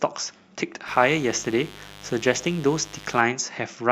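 A steady, raspy mains buzz sits under the speech from 0.87 s to 3.21 s, about 20 dB below it. Sharp switching spikes from a dimmer, rectifier or unshielded line, repeating twice per 50 Hz cycle, spread harmonics up into the kilohertz range.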